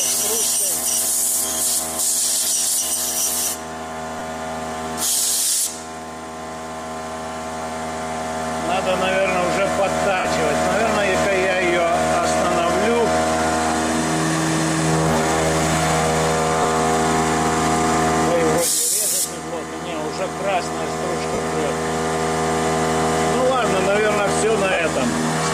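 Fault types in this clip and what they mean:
Lost LE Audio frames: the Bluetooth LE Audio link dropped frames, and the LC3 decoder filled each gap by repeating the last received spectrum with randomised signs, fading it as the gap lengthened. Short smeared, noise-like patches replace the real sound at 4.19 s and 16.62 s (about 15 ms each), and longer ones at 10.19–10.25 s (52.5 ms) and at 21.33–21.38 s and 24.72–24.77 s (45 ms each), consistent with runs of 7.5 ms frames.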